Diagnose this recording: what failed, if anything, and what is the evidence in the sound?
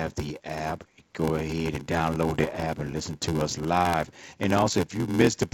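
A steady low buzz at about 86 Hz runs under the whole speech recording, and the speech drags, playing at 0.861 times normal speed while the timbre stays natural. This is a block size mismatch (padded) at the driver or buffer stage. One stage hands over shorter blocks than the next reads, and the remainder of each read is zero-filled. The buzz rate fits a 512-sample read, and each block's short gap stretches the timing.

From 2.30 to 2.66 s, between "app go ahead and" and "and listen to us", the sound breaks into pops and rough, gravelly bursts, with the level jumping briefly up and down. These are bit errors on an ADPCM link, at a rate of about 0.7 percent, arising in the network or transmission path carrying the G.722 stream. The 64 kbit/s G.722 coding itself leaves at most a faint trace. Each flipped bit corrupts the decoder's step size and predictor, so every error keeps ringing for several milliseconds instead of staying a single click.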